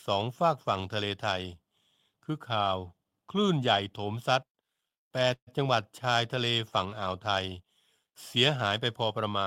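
At 5.33 s the speech halts in a call audio freeze lasting until about 5.49 s. The last sound is drawn out into a fading buzz or hiss, and about 70 ms of that stretch is silence before the speech resumes exactly where it stopped. The likely cause is delayed packets draining the jitter buffer. Unlike a packet-loss dropout, nothing is skipped: about 135 ms of filler is inserted, so everything afterward runs 135 ms later.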